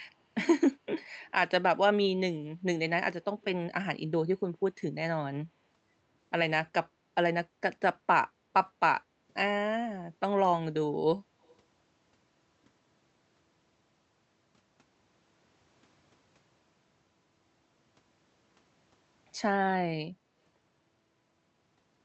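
From 8.32 to 8.45 s the room sound behind the speech dips by about 6 dB for around 150 ms, then comes back. This is background gated by the echo canceller, which pulled the microphone down hard while the far-end loudspeaker was active.

From 11.44 to 11.55 s a very faint, delayed copy of the speech trails the original by about 135 ms. This is an echo leak, likely from a loudspeaker-side echo canceller letting part of what its microphone picked up slip back into the call.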